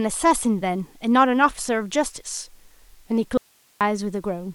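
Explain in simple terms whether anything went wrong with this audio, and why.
Something did go wrong: there's an audio dropout to a faint residue in this speech from 3.38 to 3.81 seconds. For a bit under half a second the voice just vanishes, and all that's left is a faint hiss, way down below the normal level. It cuts out and snaps back abruptly rather than fading like a natural pause. That points to the signal likely getting lost briefly while the recording path behind it kept running.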